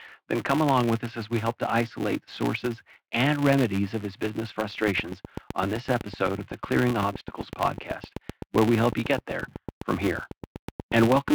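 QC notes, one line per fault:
Throughout: filter restarted on every block. There's a steady buzz at 200 Hz riding along with the speech, getting louder when the talking gets louder and dropping back in quieter stretches. Each processing block starts the filter from silence, so a small transient kicks off every block. The blocks recur every 5 ms, so those transients line up into a 200 Hz tone instead of separate ticks.
4.87 to 11.29 s: train of clicks. Right after "remedies of his business", a run of sharp, same-shaped clicks starts at a very regular 7.96 per second and keeps going nearly to the end, roughly fifty in all. They peak at about 10 dB above the speech, so they cut through clearly and stay audible in the pauses. This is likely interference from nearby equipment or a faulty connection or power supply injecting a pulse on a fixed cycle.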